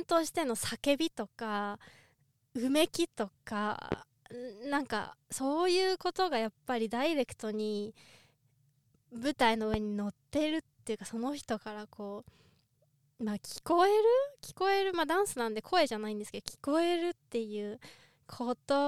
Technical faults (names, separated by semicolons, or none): loud pop